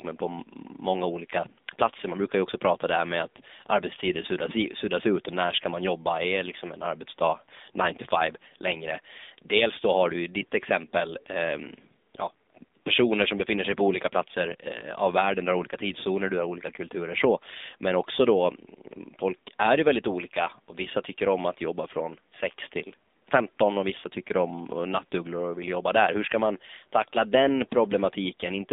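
Speech runs through the AMR narrowband mobile codec from start to finish. The band is held between 200 Hz and 3.7 kHz. The damage is plainly audible, with a buzzy, synthetic edge that fits a low rate near 7.4 kbps. Faint room noise sits about 45 dB below the speech.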